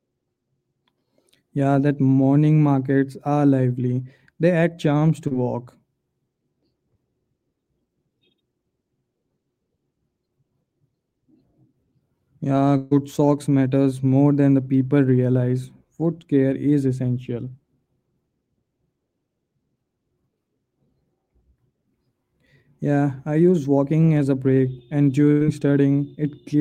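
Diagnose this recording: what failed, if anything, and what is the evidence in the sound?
The network stage dropped packets and the receiver had to cover for them. One instance is short concealed packet loss: at about 5.27 to 5.33 s some 40 ms of speech never arrived, and the decoder extended the preceding sound before blending back, leaving a brief smear in the speech.

Two longer gaps are bursts of packet loss, again on the network path. At 12.77 to 12.93 s roughly 140 ms went missing, and at 25.31 to 25.43 s about 100 ms. Each time the receiver stretched the last sound and let it fade before speech resumes further on; at 12.77 s there was no outright silence.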